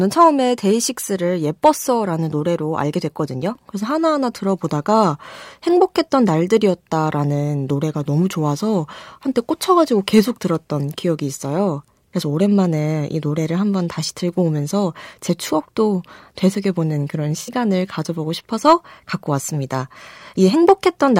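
At 17.41 s the speech breaks into a brief patch of AAC frame loss with concealment, lasting to 17.50 s. About 64 ms of coded audio went missing, which fits three lost frames. The decoder rebuilt the gap from the last good spectrum. It sounds smeared, noisy or phasey.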